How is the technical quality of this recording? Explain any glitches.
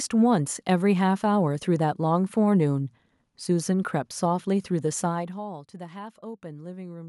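No glitches are audible anywhere in this recording.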